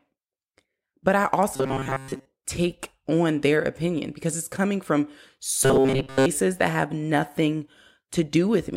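Speech that twice turns into a rigid metallic buzz near 134 Hz, from 1.54 to 2.26 s after "but I" and from 5.64 to 6.26 s after "because it's coming from", robotic sound likely from repeated short buffers of about 7.5 ms replacing most of the real audio.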